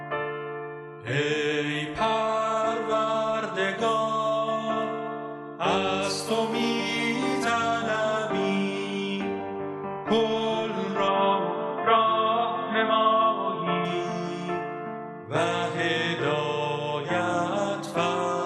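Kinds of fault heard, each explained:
Input switched to a poorer device: from 11.08 to 13.85 s the sound turns dull and boxy with nothing above 3.8 kHz, a moderate level shift, a faint new background hiss and no gap at the switch, likely because capture moved to a narrower-band microphone or headset profile.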